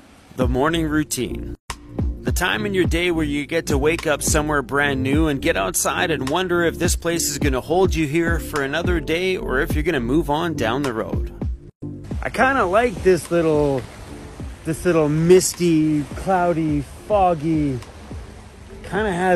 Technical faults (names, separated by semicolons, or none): gap at a join of encoded pieces